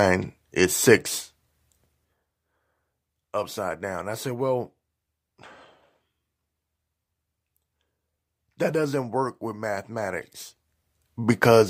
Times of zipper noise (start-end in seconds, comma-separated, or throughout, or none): 9.94-11.33